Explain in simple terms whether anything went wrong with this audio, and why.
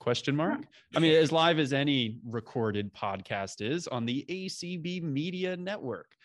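Nothing went wrong with this speech recording, and careful listening turns up no technical fault at any point. At no moment is the sound disturbed by a problem in how it was captured, sent or played back.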